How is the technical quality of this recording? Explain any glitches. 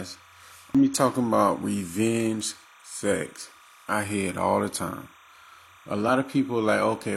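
The recording has three distinct technical faults: a continuous background tone and two kinds of intermittent glitches in the speech.

Timecode bleed runs through the whole clip. Linear timecode at 30 frames per second leaks in from an adjacent track or cable. Its square wave alternates near 1 kHz and 2 kHz, producing a steady chirping warble roughly 30 dB below the speech.

Periodic USB or driver dropouts occur about seven times, every 1.024 s, from 0.63 s to 6.68 s. Each time, a background task stalls the bus or driver and about a millisecond of audio becomes silence. This is heard as regular small ticks.

Damaged data in a compressed stream appears at 0.75 s and again from 6.04 to 6.09 s. Corrupted frames make the decoder lose sync and hunt for the next header, giving a brief squawk or blip.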